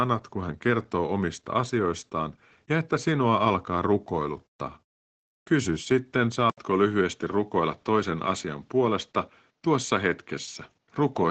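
From the start, the speech carries plainly audible Opus voice compression: the linear-prediction coder models the voice coarsely, leaving it muffled, hoarse and faintly robotic, which fits a low rate near 12 kbps. A spectrogram shows a hard ceiling at about 8.9 kHz with nothing above.

At 6.50 s the input was likely switched to a poorer device. An 80 ms gap of silence is followed by a duller, narrower sound whose spectrogram ceiling drops to 7.6 kHz, with a faint new noise floor. The waveform stays at roughly the same level.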